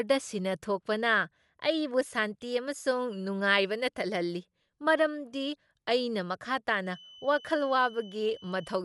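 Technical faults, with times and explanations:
Throughout, Dolby Digital compression: the speech sounds dull, with nothing above 11.5 kHz and a rough, fluttery noise, likely from a low-bitrate encode, around 64 kbps.
6.79 to 8.84 s, feedback whistle: a thin, steady 3 kHz tone wavers well beneath the speech, likely a loudspeaker-to-microphone loop sitting right at the edge of feedback.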